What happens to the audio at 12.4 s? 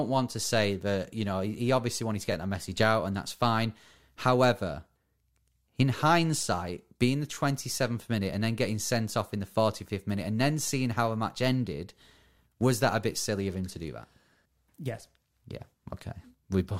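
From 12.37 to 12.39 s, after "how a match ended", overlapping chunks replay about 21 ms at a 5-second chunk join, causing a brief stutter before "was that a bit".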